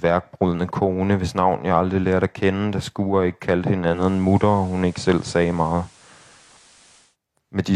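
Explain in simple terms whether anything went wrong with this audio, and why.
From 3.87 to 7.17 s, digital radio blending to analogue: the radio lost the digital signal and faded to FM, bringing faint hiss.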